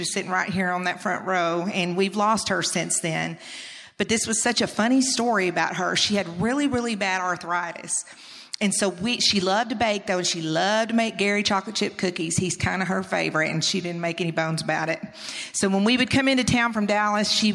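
No technical faults are audible.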